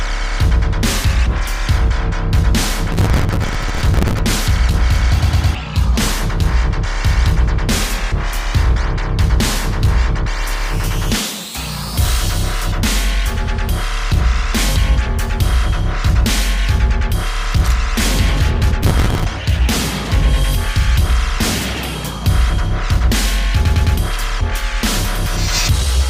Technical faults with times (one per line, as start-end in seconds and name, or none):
2.92-4.19 processor overload crackle
18.83-19.25 processor overload crackle